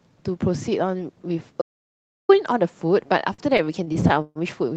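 From 1.62 s to 2.29 s the speech falls into an audio dropout to silence: for about 0.68 s the signal drops to silence, with no room tone or noise floor left, and whatever was said then is simply gone. The sound points to the input being lost, likely a disconnected device or a sudden mute, while recording carried on. Unlike a stall, nothing is stretched or faded to bridge the gap. It is a hard, empty hole.

Between 3.07 s and 4.39 s come repeated stalls (stutter). Twelve times the jitter buffer ran dry and the receiver held or extended the last sound until more arrived, filling about 321 ms in all, roughly a quarter of that stretch, with the longest wait 139 ms. Nothing is missing, so the speech drags and judders rather than breaking into silence. That separates it from the dropout. Throughout, the Opus call coding limits the band near 8 kHz.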